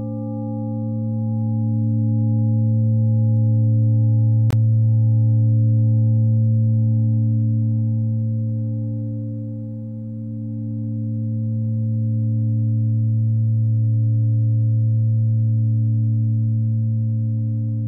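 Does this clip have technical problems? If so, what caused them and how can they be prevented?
Yes: a block of digital silence from 4.51 to 4.53 s. A hard cut to zeros, fitting an unfilled 1024-sample buffer, with no fade. Prevent it by giving the audio thread larger buffers or higher priority so output is always filled on time.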